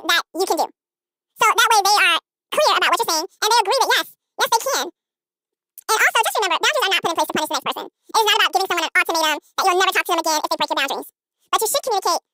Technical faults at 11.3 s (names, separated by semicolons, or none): audio read two samples at a time (double speed)